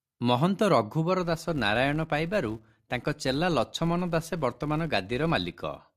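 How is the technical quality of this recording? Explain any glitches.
The recording has one clear problem. From 1.2 s to the end, the filter is restarted on every block, leaving a 188 Hz buzz that rises and falls with the speech level, which fits a 256-sample block.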